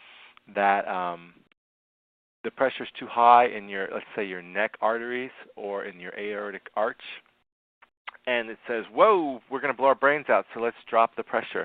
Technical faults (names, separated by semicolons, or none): none